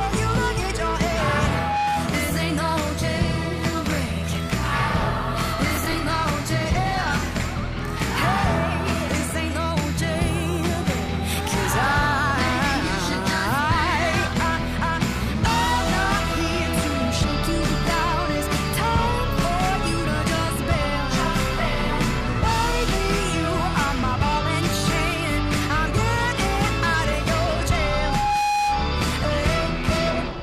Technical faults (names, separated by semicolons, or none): loudspeaker feedback squeal; processor overload crackle